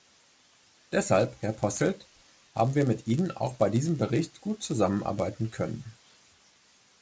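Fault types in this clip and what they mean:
Resampler restarted on every block: the conversion, which fits 44.1 kHz to 16 kHz, runs on each 10 ms block in isolation, so every block edge lacks true neighbouring samples and carries a small error, heard throughout as a 100 Hz buzz riding on the speech.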